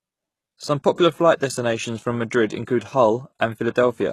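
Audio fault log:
Throughout: HE-AAC compression, likely the cause of the plainly audible coding damage across this speech. The sound points to a low bitrate, around 16 kbps, where only the lower spectrum is coded and the treble is rebuilt by copying lower bands upward under a coarse envelope. That synthetic top end keeps brightness but not the real detail, so s sounds come out gritty and lispy, and nothing remains above about 12.3 kHz.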